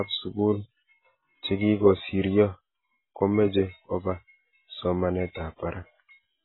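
Speech, with heavy AAC compression running through the whole clip. Nothing survives above 4 kHz, so the voice sounds dull, and the sustained vowels and sibilants take on a warbling, fizzy smear. A plain low-pass filter would only darken the sound cleanly. Here the remaining band is also patchy and swirling, the mark of a coder discarding quantised frequency lines. The likely cause is AAC-LC encoding at a low bitrate, around 16 kbps.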